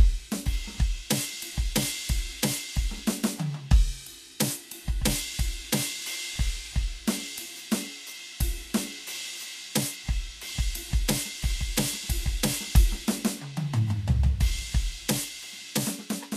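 Music, carrying plainly audible Vorbis compression from start to finish: the treble is hissy and grainy, sustained tones sound roughened, and attacks are smeared. Nothing survives above 14.2 kHz, so a spectrogram shows a flat ceiling there, with speckled, noisy patches just below it where fine detail has been swapped for noise of similar energy. The damage most likely comes from low-rate Vorbis encoding, which fits a bitrate around 36 kbps.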